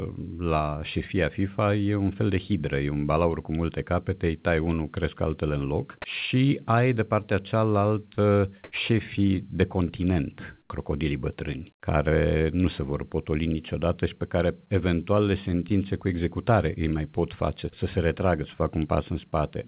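A speech recording carried over a call path whose audio stops sharply at 4 kHz, which fits narrowband G.711 telephony. At 8.64–8.72 s and 10.62–10.70 s, comfort noise in place of the background replaces the real room sound for 80 ms each. The first patch is about 21 dB louder than the surrounding background, and the second about 12 dB quieter. On a spectrogram each shows as a smooth, textureless noise band with hard edges. The likely cause is discontinuous transmission filling a pause with synthetic noise. At 10.68 s the onset is clipped by the voice detector: 20 ms of the returning sound is missing, so the waveform jumps straight from the noise patch to full amplitude with no gradual rise, most likely because the detector reacted late.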